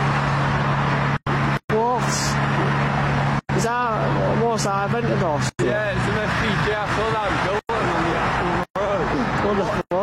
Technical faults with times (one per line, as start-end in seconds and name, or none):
1.17-1.27 gap between chunks
3.39-3.49 gap between chunks
5.49-5.59 gap between chunks
7.59-7.69 gap between chunks
9.81-9.91 gap between chunks